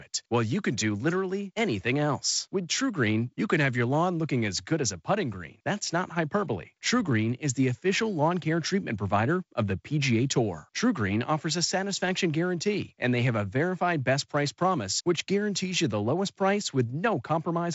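Nothing stood out on listening to this speech.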